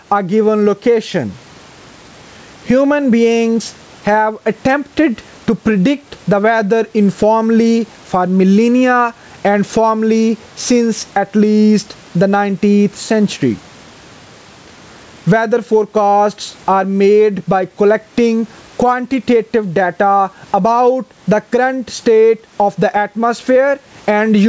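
Gain pumping runs throughout the recording, with the gain swinging by roughly 15 dB. The likely cause is microphone gain set far too high, with a fast limiter pulling it down, squashing loud and soft parts together.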